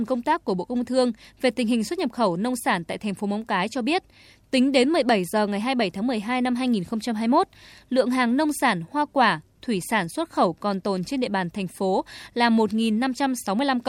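No technical faults are audible anywhere in the speech recording.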